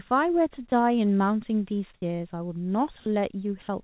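A short speech recording carried over a call link, band-limited to nothing above 4 kHz, which fits G.711 A-law at 64 kbps. At 0.70 to 0.72 s, sound dropped by the voice detector replaces about 20 ms with flat noise, likely because the detector misjudged a quiet stretch as background. Roughly 10 ms of real speech disappears. On a waveform this shows as a brief, even-textured band where the envelope should continue. On a spectrogram the harmonic striations break off and are replaced by a smooth, uniform smear before speech resumes. From 1.94 to 2.02 s, comfort noise replaces the background for about 80 ms. The pause's natural room sound, sitting about 34 dB below the loudest speech, gives way to a steady synthetic hiss about 8 dB quieter, likely generated by the receiver while the sender stops transmitting. A spectrogram shows the textured background switching to a featureless, evenly shaded patch that is darker than its surroundings. 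The waveform shows a small step down in the noise floor, then a step back up when real audio returns.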